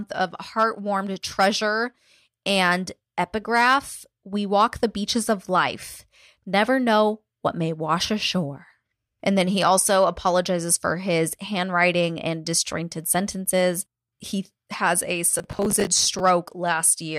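Just after "has a", from 15.32 to 16.2 s, processor overload crackle tears through the speech. Short buffers, around 10 ms each, keep missing their deadline and replaying old audio with hard edges. Unlike one isolated dropout, it's a continuous gritty burst.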